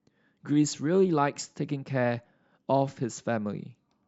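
No technical faults can be heard in this recording.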